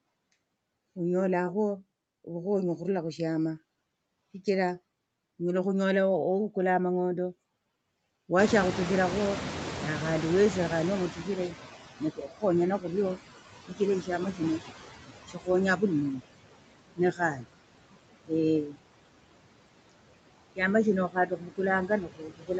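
Throughout, noise suppressor artifacts cut the steady background by about 20 dB. The spectrogram shows a speckled, gated noise floor that dips between phrases.

At 8.38 s the room noise jumps by about 23 dB, around 8.5 s, and the noise suppressor is slow to catch up. For 3.47 s, until 11.85 s, the noise gets only about 14 dB of reduction. The spectrogram shows a bright noise band that fades gradually as the noise estimate adapts.

Speech is cut by the noise suppressor at 11.15–14.6 s, 15.27–16.23 s, 16.96–17.46 s, 18.24–18.79 s and 20.56–22.59 s. The drops are about 17–22 dB. Short stretches of speech get turned down along with the noise and sound swallowed. The waveform shows abrupt notches in the speech envelope. The call microphone processing leaves nothing above 8 kHz.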